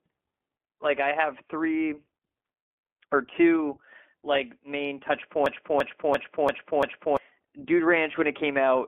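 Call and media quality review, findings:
Speech throughout sounds rough and slightly synthetic, band-limited to about 250 Hz to 3.4 kHz. Cause: iLBC codec, frames coded independently, fitting its 15.2 kbps, 20 ms mode.

5.46 to 7.17 s: machine-gun stutter, one 341 ms piece repeating five times at 2.93 Hz, about one and a half seconds lost. Cause: system hang loop, fitting a 16384-sample ring buffer replaying.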